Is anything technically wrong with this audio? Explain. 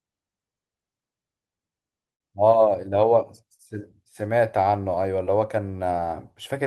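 Yes, the speech has two network packet-loss faults.

From 2.13 to 2.21 s there is a burst of packet loss. About 60 ms of audio never arrived in time to be played. The receiver covered roughly 59 ms of that hole by extending the last sound it had and fading it down, so the speech briefly turns into a held, dimming continuation. When the real signal comes back, it jumps ahead past the missing stretch.

From 5.25 to 5.28 s there is a short concealed packet loss. About 20 ms failed to reach the decoder in time. The receiver synthesised around 11 ms by carrying on the preceding sound and then blended back into the real audio. What you hear is a quick smear or wobble, and a tiny piece of the speech slips out.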